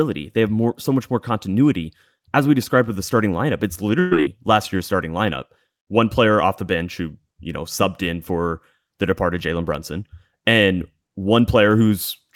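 From 3.99 to 4.13 s, a burst of packet loss drops about 120 ms of speech. The receiver holds and fades the last sound for 116 ms, then jumps ahead. Unlike a simple dropout, the gap is filled rather than silent.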